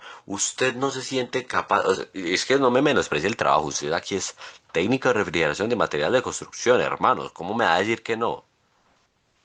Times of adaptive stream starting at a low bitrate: 0.00-2.00

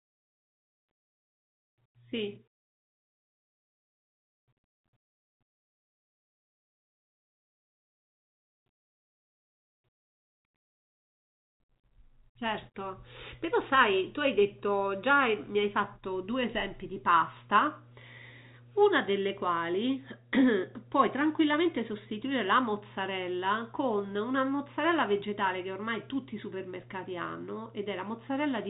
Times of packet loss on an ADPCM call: none

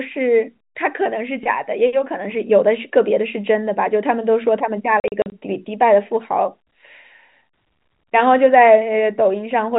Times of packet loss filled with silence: 5.00-5.32

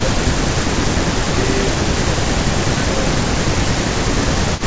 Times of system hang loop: none

